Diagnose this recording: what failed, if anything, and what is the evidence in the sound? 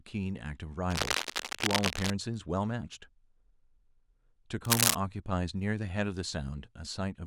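Cable scratch noise, most likely from the analogue wiring stage. From 0.90 to 2.10 s and again from 4.65 to 4.95 s, dense, uneven scratching and rustling sits over the speech, roughly level with it in the first burst and a few decibels above it in the second. A worn cable or connector being moved would vary its contact resistance rapidly. Unlike digital clicks or buffer dropouts, these bursts are irregular and continuous, with no gaps and no steady repeat rate.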